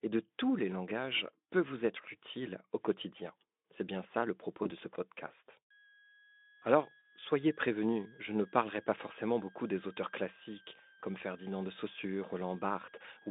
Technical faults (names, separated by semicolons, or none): VoIP packet loss concealed by the speech codec; switching supply whistle